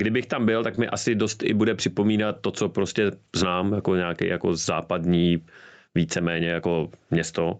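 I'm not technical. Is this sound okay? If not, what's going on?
No. Two things are wrong with this speech.

The first is gain pumping, throughout the clip. The microphone level is set far too high, and an automatic limiter keeps yanking it down whenever the speech gets loud. The level swings up and down by a fairly large amount. Loud and quiet moments end up flattened together, so the speech sounds squashed. An over-driven input is the likely cause.

The second is a short stall from a late packet, which happens three times. The call sends audio in small chunks. Here a chunk arrived late, the receiver ran out of audio, and it stretched the last sound by about 20 ms to fill the gap before carrying on. Nothing is lost, but a sound is briefly held too long with a slight buzz or dip. This happens at 0.75 s, just after "tam byl tak", and at 1.93 s and again at 2.28 s, both between "asi dost i bude" and "to co prostě znám".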